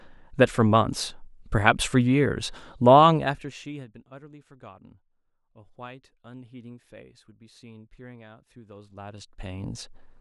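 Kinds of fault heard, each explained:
Zipper noise: The gain changes in unsmoothed 1 dB jumps, each leaving a tiny click. From 2.97 to 3.90 s the speech falls roughly 25 dB with rapid ticking. From 8.64 to 9.94 s it rises back, ticking more slowly.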